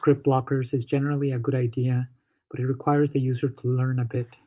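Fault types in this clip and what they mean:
No technical faults are audible.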